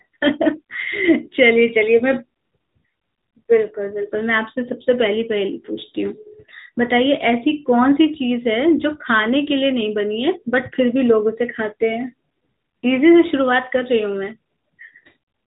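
Nothing stood out as a fault on listening to this speech.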